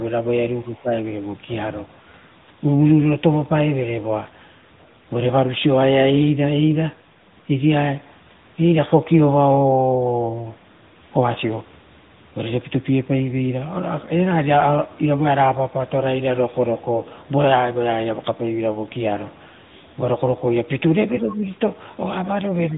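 Speech processed end to end by the AMR narrowband mobile codec: nothing above 3.8 kHz passes, and plainly audible buzzy, synthetic coding damage fits a mid-rate mode around 10.2 kbit/s.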